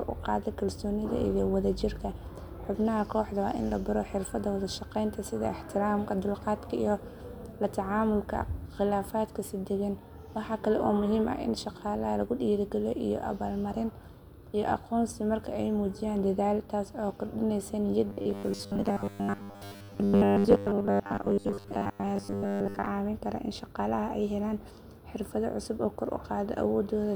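Robotic sound from repeated short buffers runs from 18.08 to 22.87 s, after "taas oo kordhinaysa". The speech becomes a metallic buzz at 100 Hz that loosely follows the words, likely from 10 ms chunks repeated through most of that stretch while fresh audio was skipped.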